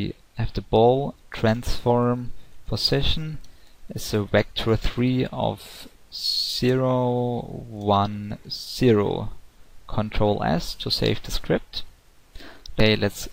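Nothing stood out as a technical fault on listening.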